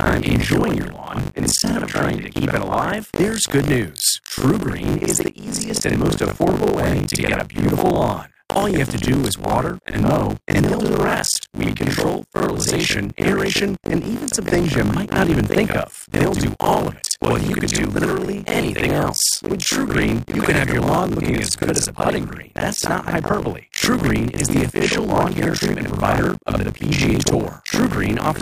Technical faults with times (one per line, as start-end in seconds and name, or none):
0.00-28.42 buffer tearing